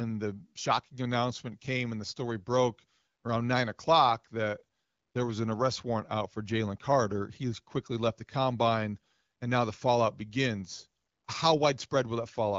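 No technical faults can be heard in the speech, which is carried by the AMR wideband (HD Voice) codec at 12.65 kbit/s.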